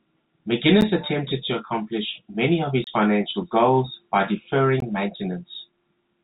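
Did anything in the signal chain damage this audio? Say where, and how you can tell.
Yes. Three brief dropouts: a tick at 0.81 s just before "attempted to accomplish many", a short hole of about 27 ms from 2.84 to 2.87 s between "to accomplish many of" and "financial goals by", and a short hole at 4.80 s right after "financial goals by". Each is a block of digital silence with hard edges. This points to the driver or buffer stage, where the output buffer wasn't filled in time. The 11 ms first gap fits a 512-sample buffer.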